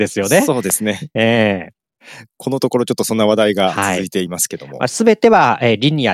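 A loud pop from 0.70 to 0.72 s cuts into this speech clip as a single sharp click, roughly 10 dB above the voice, which continues underneath. It is likely a brief voltage spike from a plug, switch, static or driver glitch, shaped by the downstream circuitry.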